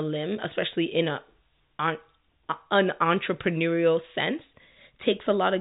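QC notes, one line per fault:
No faults are present: the speech is carried in G.711 telephone coding at 64 kbps, its band ends at 3.8 kHz, and at most a faint level-following grain from the 8-bit logarithmic steps can be heard beneath it.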